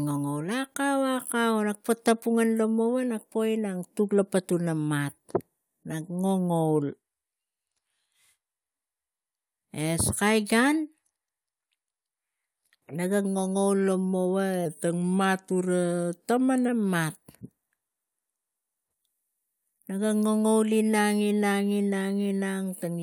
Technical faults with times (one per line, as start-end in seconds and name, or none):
14.66-16.68 wrong sample rate